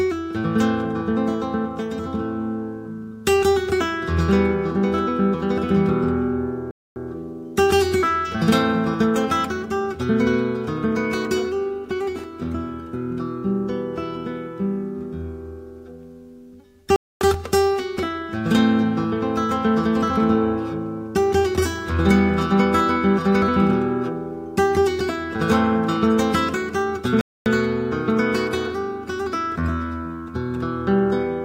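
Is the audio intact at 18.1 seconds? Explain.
Yes, at 18.1 seconds the audio is intact, with no fault of any kind at that moment.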